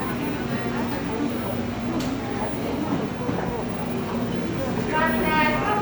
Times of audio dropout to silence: none

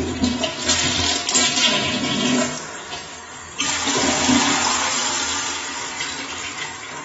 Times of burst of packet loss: none

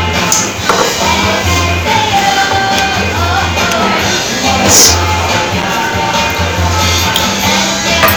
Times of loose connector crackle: 5.58-5.64

